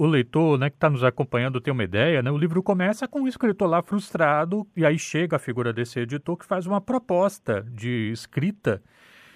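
No dropouts, clipping, glitches or other transport faults are audible anywhere in the speech.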